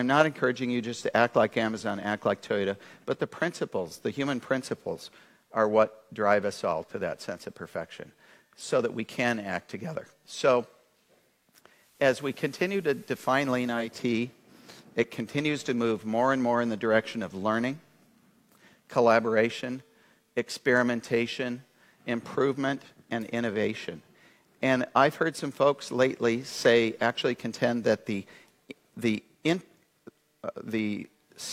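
From 11.67 to 14.06 s the receiver shows digital radio blending to analogue: it lost the digital stream and cross-faded over about 0.42 s to the station's FM broadcast, then returned the same way. Unlike a dropout or mute, the sound never stops. Instead, hiss rises to roughly 30 dB below the signal and the level dips by about 1 dB until the digital path comes back.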